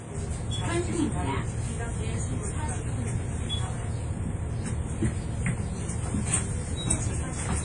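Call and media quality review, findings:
Ringing, washy texture with hiss that swells and recedes with the signal; nothing above 10.1 kHz, throughout. Likely WMA compression at a low bitrate, around 32 kbps: long transform blocks smear quantisation noise over tens of milliseconds, weak components zeroed.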